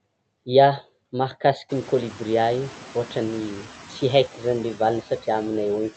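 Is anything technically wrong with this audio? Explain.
Yes. Throughout, noise suppressor artifacts: the suppressor cuts steady-noise bands by about 13 dB frame by frame, so the room noise, which rises around 1.5 s, dips between phrases and swells under speech.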